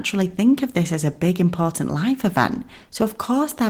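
No technical faults can be heard anywhere in the recording; the signal holds steady, with nothing disturbing it at any point.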